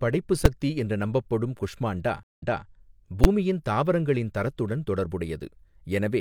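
At 0.45 s there's a sharp bang. That's invalid numbers at full scale: a calculation blew up into infinite or invalid values, and about 5 ms of output got pinned to the maximum. Because the block is so short, you hear one loud click rather than two separate pops.

From 2.23 to 2.66 s there's a stream reconnect. The connection dropped, giving roughly 147 ms of silence, and a fresh decoder picked up mid-stream. Playback resumes 279 ms earlier than where it cut, so a short stretch of speech repeats.

At 3.24 s there's another full-scale bang from invalid numbers, about 10 ms long this time. It's still too brief to split into distinct start and end pops.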